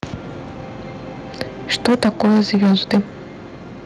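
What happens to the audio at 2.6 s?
At 2.6 s the sound sits inside microphone overload lasting from 1.72 to 3.0 s. Peaks, likely pushed about 12 dB past the converter's limit, are flattened, giving a harsh crackle. The waveform shows squared-off tops. The spectrogram shows broadband smearing on loud moments.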